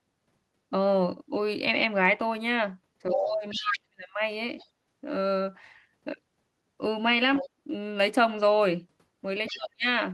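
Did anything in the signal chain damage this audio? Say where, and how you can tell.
Yes. The damage sits in call processing, in the echo canceller. Speech suppressed in double talk shows up from 3.12 to 4.07 s and again from 9.51 to 9.85 s. The level falls sharply, by roughly 40 dB at its deepest in the first stretch. Each dip lines up with the other side's voice arriving. That is likely the canceller failing to separate near speech from loudspeaker echo, and turning both down.

The other side's voice leaking through is audible in five short scraps: 3.16 to 3.23 s, 3.50 to 3.78 s, 4.58 to 4.66 s, 7.36 to 7.49 s and 9.47 to 9.57 s. Most sit about 10 dB under the talker. The one at 3.50 s is louder, only about 5 dB down. The one at 4.58 s is faint, about 30 dB down. This is likely residual echo that the canceller left in the microphone path.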